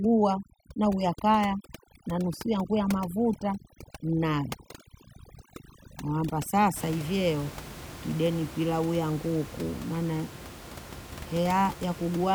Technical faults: overdone noise removal

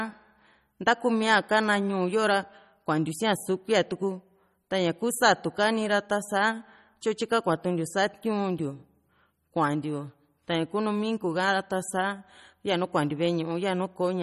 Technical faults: MP3 compression

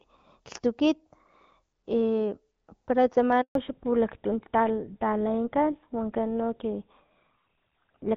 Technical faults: handover gap; fallback to narrowband

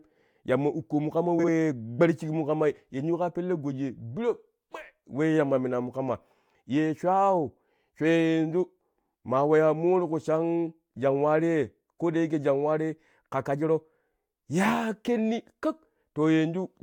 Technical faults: frames out of order

